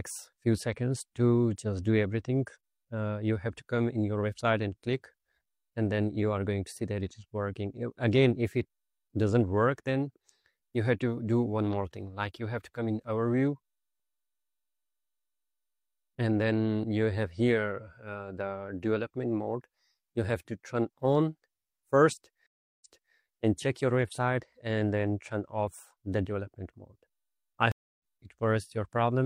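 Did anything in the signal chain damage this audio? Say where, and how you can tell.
Yes. Two stages left marks. The first is the driver or buffer stage. A block of digital silence appears at 14.00 s and again at 23.76 s. The first gap lasts about 0.67 ms, roughly 32 samples. The second lasts 2.0 ms. Both are too short to hear as holes. Each is a sharp tick instead. The audio drops straight to zero and returns with no fade. That fits an output buffer that was not filled in time.

The second fault is a stream reconnect, a network-stage failure. It happens twice. At 22.46 s the sound drops out for 345 ms. It comes back at 23.15 s, but 341 ms earlier in the material, so a short stretch repeats. At 27.72 s there is 279 ms of silence. Playback resumes at 28.02 s, roughly 0.3 s further on, so material is skipped. Each time the connection broke, and a fresh decoder restarted mid-stream.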